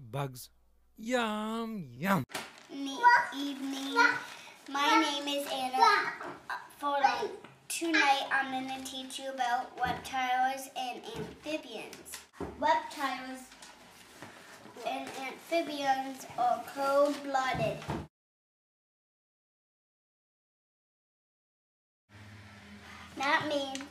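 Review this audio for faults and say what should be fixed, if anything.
Compressed frames are skipped at 1.96 s, 3.16 s and 11.60 s. At each point the decoder drops whole frames, which fits a frame length of about 26.1 ms. The first two jumps lose about two frames, roughly 50 ms of sound, and the third loses about one frame, roughly 30 ms. To prevent this, verify file integrity after transfer and re-encode from an undamaged source.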